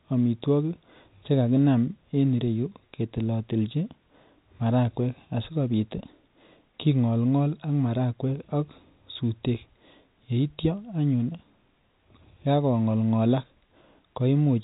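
No faults are present in the speech; the G.711 mu-law telephone coding at 64 kbps is working as intended, with nothing heard above 3.8 kHz.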